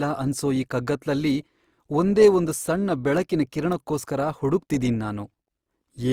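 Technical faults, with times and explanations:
Throughout, Opus compression: the speech sounds grainy, rough and noisy, though the top end still reaches about 20.4 kHz. The likely cause is Opus in its music mode, filling bit-starved bands with folded or noise-like content, which fits a rate near 24 kbps.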